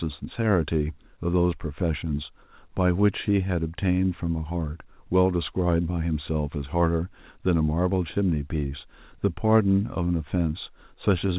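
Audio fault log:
No audible faults detected.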